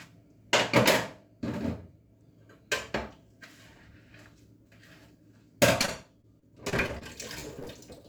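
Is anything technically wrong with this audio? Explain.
Yes. Repeated packet loss (robotic sound) occurs from 5.81 to 7.03 s and again from 7.39 to 8.02 s. Short holes, up to 36 ms, come in quick succession. Each is patched by extending the previous sound, so the audio turns choppy and robotic.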